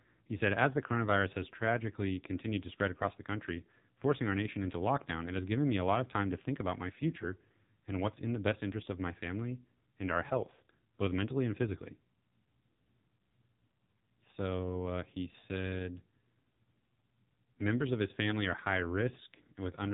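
Buzzy, synthetic-sounding speech runs the whole way through, with nothing heard above about 3.8 kHz. It is AMR narrowband mobile codec damage: a pulse-driven vocal-tract model squeezed hard enough to suggest AMR-NB's low 5.9 kbps mode, flattening the voice and cutting its upper band.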